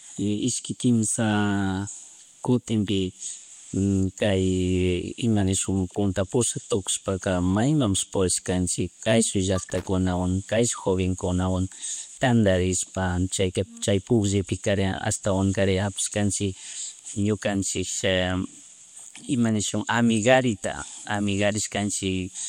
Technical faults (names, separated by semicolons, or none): loose connector crackle